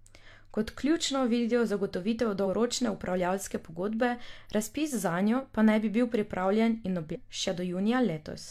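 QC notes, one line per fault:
2.42–2.47 s: damaged data in a compressed stream. A short glitch about 50 ms long sits between "ključno vidijo zagotovitev" and "upravljavske pogodbe razpis zanjo". Corrupted bytes made the decoder misread frames there and lose sync.
7.11–7.17 s: damaged data in a compressed stream. A similar blip of about 60 ms follows "bi bil pripravljen in". The decoder again hit bad data, produced garbage briefly, then found the next valid frame header and resumed.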